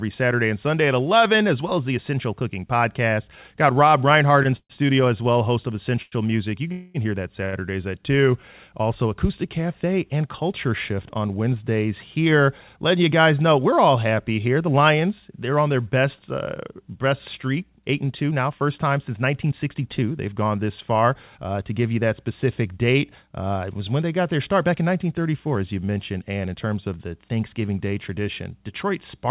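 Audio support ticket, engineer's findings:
Repeated stalls (stutter), 4.43–7.56 s: four short gaps, about 0.31 s filled in total, longest 130 ms. Jitter buffer repeatedly ran dry on late packets. Receiver extended the last sound through each wait, so playback drags and stutters.

Call audio freeze, 6.72–6.97 s: 227 ms held, extended sound with no silence, then resumes where it stopped. Likely a network hold-up emptying the jitter buffer. Playout delay grows by the same 227 ms.

Jitter buffer speed-up, 12.26–13.11 s at 107% and 17.86–23.23 s at 106%: pitch unchanged, pacing hurried, roughly 70 ms and 300 ms trimmed. Receiver cut pitch-period slices to drain excess buffered audio. Call path band-limited at 4 kHz, consistent with G.711 mu-law.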